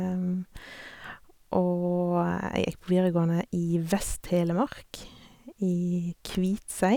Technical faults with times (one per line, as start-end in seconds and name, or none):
none